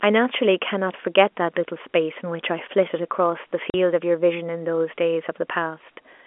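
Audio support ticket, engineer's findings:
Packet loss filled with silence, 3.70–3.74 s: one 40 ms dropout in the speech, hard edges. Fits two lost 20 ms packets, gap zero-filled by receiver. Waveform: flat-line hole with abrupt edges. Spectrogram: blank vertical stripe, inside the G.711 telephone band of 250 Hz to 3.4 kHz.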